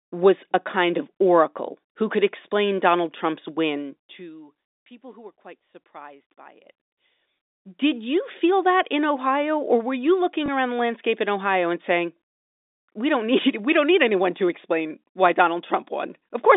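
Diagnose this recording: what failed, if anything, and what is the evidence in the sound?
The failure is zipper noise in the gain stage, where the level is updated per buffer in the driver or call-processing path. From 3.76 to 4.54 s, just before "people who were quite", the level falls by roughly 20 dB. From 7.19 to 7.77 s, after "quite surprised by it", it climbs back by a similar amount. Both moves tick audibly at around a hundred steps a second. The gain is being written once per buffer without interpolation, which points to buffers of about 10 ms, and each jump leaves a small click on the telephone-band audio.

Packet loss with the last packet repeated also occurs, in the network stage, from 10.46 to 10.48 s. It falls between "or were you looking" and "around the landscape in". A single 20 ms packet went missing, and the receiver filled the gap by replaying the previous packet. That repeated segment seldom lines up with the pitch period. 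The result is a small blip.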